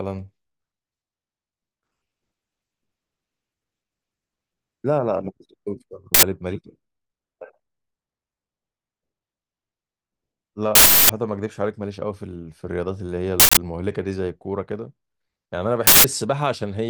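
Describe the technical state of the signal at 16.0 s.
At 16.0 s you're right in the middle of an uninitialised buffer, running from 15.87 to 16.04 s. A block of about 170 ms, which fits an 8192-sample buffer, went out before any audio was written to it, so leftover memory plays as a harsh, loud burst of digital noise.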